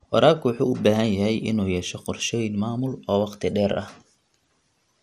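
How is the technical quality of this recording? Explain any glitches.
The speech carries audible coding damage throughout, plus one brief glitch.

MP2 compression runs the whole length: the sound is dull, with a gurgling, granular edge, likely from MPEG Layer II coding at a rate consistent with around 80 kbps, starving upper sub-bands.

DAB burbling appears at 3.72 s, just after "maamul oo waqti dheer": a short burst of burbling as bit errors, at a rate around 0.2 percent, corrupt a few frames of the audio data.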